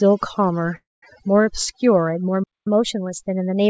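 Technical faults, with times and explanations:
Throughout, overdone noise removal: the noise reduction is pushed so hard that the background drops and breaks up into little twinkling specks, and the quieter parts of the speech get pulled down with it.
0.76 to 1.04 s, call audio freeze: the sound gets stretched into a fading buzz and then goes quiet for about 190 ms before picking up right where it stopped. That's likely late packets draining the jitter buffer, so roughly a quarter second of gap got inserted but nothing was lost.
2.43 to 2.67 s, playback stall: the audio just cuts out mid-flow for about 225 ms, then resumes. Most likely the player ran dry of data or its thread got blocked, so the output sat silent until it recovered.
2.67 s to the end, catch-up at higher speed: right after the stall everything runs about 1.1 times fast, and the pitch creeps up around a semitone and a half. 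The player is resampling its backlog to win back the lost time, which lifts speed and pitch together.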